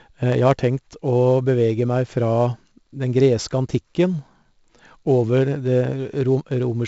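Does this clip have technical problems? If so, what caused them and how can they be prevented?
Yes. 4-bit ADPCM compression runs through the whole speech clip. Each sample is coded as a small 4-bit step from a predicted value, with the step size adapting as it goes, so the coding error becomes a gritty hiss that rises and falls with the speech level. Sharp consonant onsets smear where the step cannot grow quickly enough. The damage here is heavy, and nothing survives above 7.7 kHz, which points to a low sample rate and a 64 kbps stream. To prevent it, record and deliver in uncompressed PCM, or use a modern perceptual codec at a sufficient bitrate and sample rate.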